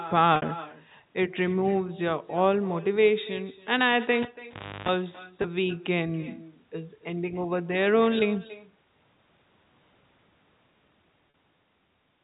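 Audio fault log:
Throughout: echo with no canceller. Every phrase of the speech is followed roughly a third of a second later by a quieter, thinner copy at about 18 dB below the direct sound. The far end's loudspeaker is feeding its microphone, and nothing strips that return path before it travels back.
0.36–0.42 s, 5.42 s, 11.30 s: packet loss with pitch repetition. Gaps of 60 ms, 20 ms and 40 ms are bridged by repeating the last pitch period, heard as a brief held, buzzy tone. The longest one starts to fade before the speech cross-fades back in.
4.22–4.89 s: cable pulled and plugged in. A pop cuts the audio to near silence for about 0.61 s. Then a 50 Hz mains buzz lasting about 0.33 s comes in while only the plug tip makes contact, and a second pop marks the signal returning.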